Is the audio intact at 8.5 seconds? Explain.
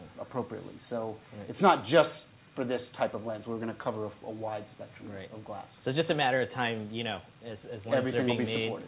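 Yes, the audio is intact at 8.5 seconds, with no dropout, glitch or other fault at that point.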